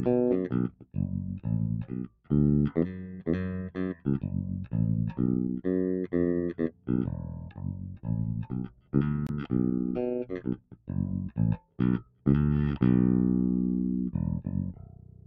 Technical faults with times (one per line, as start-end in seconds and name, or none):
0.00-15.26 noise suppressor applied to music or sounds
0.69-0.97 sound cut by the noise suppressor
2.07-2.31 sound cut by the noise suppressor
3.94-4.29 sound cut by the noise suppressor
6.71-8.09 sound cut by the noise suppressor
8.40-8.94 sound cut by the noise suppressor
9.27-9.30 Bluetooth dropout
10.40-10.94 sound cut by the noise suppressor
11.58-12.26 sound cut by the noise suppressor
14.73-15.26 sound cut by the noise suppressor